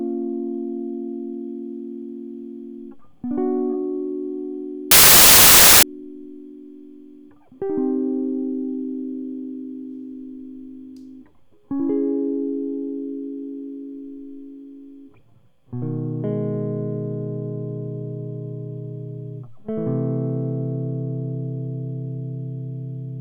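A music clip with a wrong sample width fault from 4.91 to 5.83 s. Data written as 32-bit integers are read as 16-bit, so each sample is split across two mismatched values. The music sinks into loud noise, playing at half speed and an octave low.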